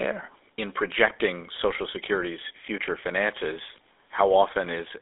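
Throughout the speech runs through a GSM full-rate codec, which fits 13 kbps: pulse-driven excitation leaves a buzzy, gravelly roughness, with the band held to 300 Hz to 3.6 kHz and nothing above 3.7 kHz. That roughness, not just the narrow band, separates it from a plain telephone filter.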